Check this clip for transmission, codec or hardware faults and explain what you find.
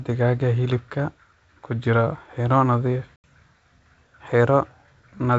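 One transmission fault stands out in this speech clip: packet loss on an ADPCM call, from 3.16 to 3.24 s. About 80 ms of audio, roughly four packets, was lost and replaced by silence, leaving a hole with hard edges. ADPCM codes each sample as a difference from a running prediction, so after the gap the receiver's predictor and step size no longer match the sender's. The speech returns with some slight distortion, then settles within some tens of milliseconds. The G.722 wideband coding at 64 kbit/s carries the speech cleanly up to about 7 kHz, with at most a faint hiss in the upper band.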